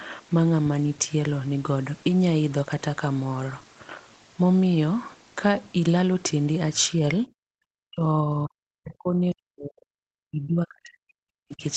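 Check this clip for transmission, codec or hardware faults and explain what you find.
One fault recurs in the second half: speech suppressed in double talk, from 7.22 to 7.65 s, 7.89 to 9.99 s and 10.3 to 11.64 s. The speech sinks by as much as about 40 dB, in patches or in near-total cut-outs. The likely cause is an echo canceller that could not tell the talker from loudspeaker echo while both sides spoke, so it attenuated everything. A waveform shows the envelope collapsing in these spans, and a spectrogram shows the energy fading to near-blank. The audio is band-limited to 8 kHz throughout, which points to the call path.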